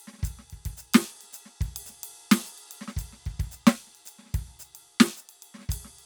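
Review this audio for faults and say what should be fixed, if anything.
Nothing here needs fixing: the music comes through with an intact signal path and no audible technical faults.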